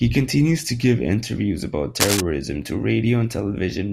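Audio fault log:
2.00–2.21 s, cable scratch noise: right after "to give interviews about", a dense, ragged burst of scratching rides over the speech at roughly the same loudness for about 0.2 s. This is likely a worn cable or connector being moved, its contact resistance fluctuating rapidly.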